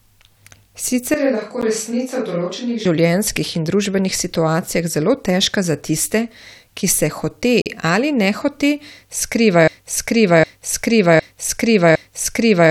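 The clip is speech. From 1.14 to 2.85 s the sound turns roomy and hollow. It loses bass and drops by about 5 dB. Background noise rises to roughly 35 dB below the speech. The change in and out is abrupt. This is likely a switch to a distant microphone, with the close microphone's signal missing for that stretch. There are two gaps between stream segments. The first is a 12 ms hole at 1.61 s, inside the distant-microphone stretch. The second runs from 7.62 to 7.66 s and lasts 41.5 ms. Both have hard edges and are filled with silence. They fall 6 s apart, which points to 6-second segments whose time stamps don't quite meet. Nothing is lost; the sound just pauses. From 9.68 s to the end, a 759 ms piece repeats exactly, back to back, four times. The clip ends inside this repetition. It is a broken-record loop. The player, encoder or stream likely stalled and kept resending the last fragment it held. 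The audio that should have played in those final three seconds is lost.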